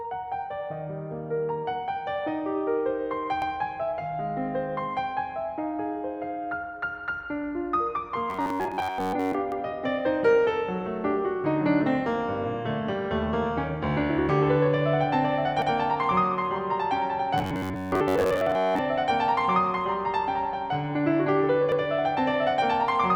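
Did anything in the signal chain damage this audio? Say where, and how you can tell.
Yes. At the buffer or processing stage the music was handled in 6-second chunks that overlap, so each join replays 100 ms of audio. This produces overlapping chunks, heard as a regular stutter at 3.42, 9.52, 15.62 and 21.72 s.

From 8.30 to 9.35 s and from 17.38 to 18.79 s, a rigid metallic buzz at 93.8 Hz is heard. This is robotic sound from repeated short buffers, likely caused by a starved driver looping a segment of about 10.7 ms while most of the real audio is skipped.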